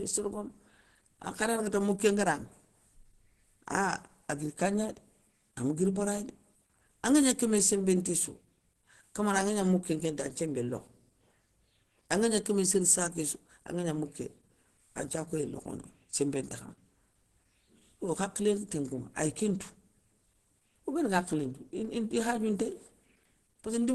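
Muffled, hoarse speech runs through the whole recording, with nothing above about 12.1 kHz. The damage is plainly audible from start to finish, pointing to a low bitrate around 16 kbps. The likely cause is Opus compression in its hybrid mode: the encoder codes the lower band with its speech model and fills the upper band coarsely, trading clarity and breath for hoarse texture.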